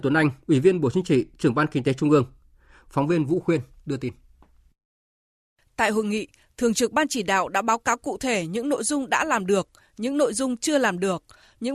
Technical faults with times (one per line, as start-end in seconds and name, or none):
8.77 AAC frame loss with muting